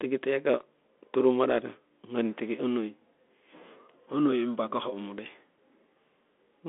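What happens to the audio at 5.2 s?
The speech at 5.2 s carries the Bluetooth CVSD headset codec damage present across the whole clip: a 1-bit up/down slope coder, fitting a 64 kbps stream, squeezes it into a 250 Hz to 3.5 kHz band with nothing above 3.8 kHz, leaving scratchy s sounds and granular hiss.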